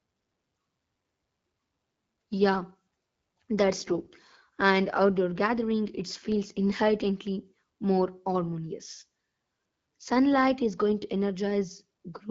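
From 3.87 to 4.08 s, AMR bit errors briefly turn the speech hoarse, scratchy and gargly while its pitch and loudness hold roughly steady. Over about ten 20 ms frames, a few percent of the weakly protected bits arrived flipped, misplacing excitation pulses and skewing the finer pitch, gain and spectral values. A spectrogram shows smeared, noisy harmonics with broken formant tracks there, and the waveform looks ragged while keeping its envelope. The surrounding AMR-WB audio sounds clear, consistent with roughly 12.65 kbit/s.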